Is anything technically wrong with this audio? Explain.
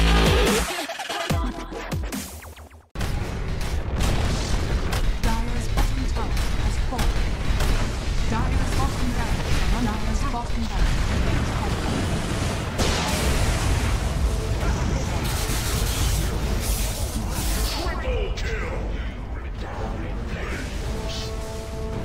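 Yes, audio missing between chunks: brief skips at 2.82, 5.77, 8.72, 11.67, 14.62 and 20.52 s, each losing about a twentieth of a second. The regular spacing likely comes from closing and reopening 3.0 s chunks. Unlike a dropout, there is no silence; the sound jumps straight ahead.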